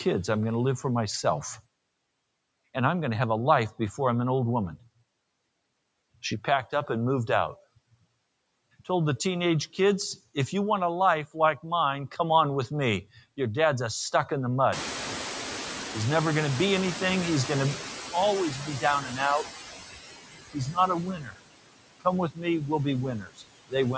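From the start there are noise suppressor artifacts. The suppressor is pulling the steady background down by about 21 dB, working band by band on each short frame. The noise dips away in the gaps and creeps back up under the speech. The audio is band-limited with nothing above 8 kHz, which is just the call microphone chain.

Right after "a stuck in the", around 14.5 s, the room noise jumps by about 22 dB. From 14.72 to 17.99 s you hear the noise suppressor catching up. Its noise estimate lags behind that rise, so at first only about 7 dB gets taken off and the louder background comes through fairly raw. Over roughly 3.3 s it settles back down as the estimate adapts.

After that the speech gets cut by the noise suppressor in a few places, where it mistakes quiet bits of speech for noise. There's a mild dip of about 6 dB at 19.01–19.19 s. A deeper one of about 16 dB comes at 21.15–21.4 s, and another of about 17 dB at 22.31–22.45 s, just before "we'll be". 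The worst comes right after "we'll be", at 23.2–23.74 s. It drops about 22 dB over roughly 0.4 s, and that stretch sounds swallowed and faint.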